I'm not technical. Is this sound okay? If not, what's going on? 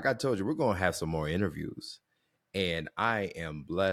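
Yes, this recording sounds fine, and nothing in it suggests a technical problem. The speech comes through steadily, with no breaks or disturbances anywhere in the clip.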